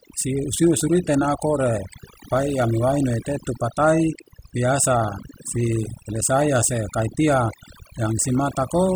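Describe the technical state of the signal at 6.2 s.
Speech sits over a background that drops and breaks up, scattered with twinkling specks. That is overdone noise removal, present throughout the clip: a noise reducer set too strong shuts off individual frequency bands near its noise estimate, taking quiet speech detail with them.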